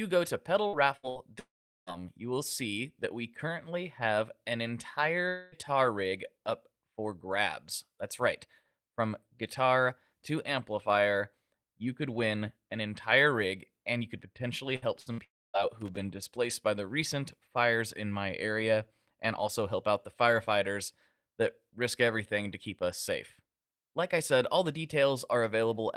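From 0.67 to 1.18 s the speech turns choppy and robotic. This is repeated packet loss (robotic sound): three short holes, the longest about 63 ms, totalling 180 ms. Each is patched by stretching the preceding sound, so about a third of that half-second is synthetic fill rather than real signal.

Shortly after, from 1.39 to 1.90 s, the audio smears into a fading buzz and then goes quiet for roughly 0.4 s before resuming at "you will see that". This is likely a long network dropout. About 480 ms never arrived, and the receiver's extrapolation ran out partway through, leaving silence.

A second gap from 5.29 to 5.55 s sounds different. The missing 240 ms is bridged entirely by a held, droning continuation of the previous sound with no silent portion, again likely a long network dropout.

Right after "and you could potentially", from 14.76 to 15.21 s, the robotic chop returns. Repeated packet loss recurs here as three holes, the longest about 64 ms, adding up to 180 ms, with about 40% of the span concealed.

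It runs straight into another break from 15.24 to 15.57 s. A brief buzz decays into roughly a quarter second of silence, likely a long network dropout losing about 300 ms.

Just before "displaced by the recent", from 15.81 to 15.97 s, an irregular burst of crackle and scratching cuts through. This is loose connector crackle: a contact intermittently making and breaking, chopping the signal for about 150 ms.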